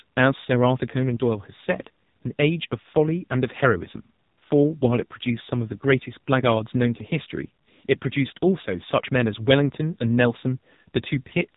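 Throughout, the speech carries AMR narrowband mobile codec damage: a hard spectrogram ceiling near 3.8 kHz, and a heavily buzzy, synthetic timbre that fits a low 6.7 kbps mode.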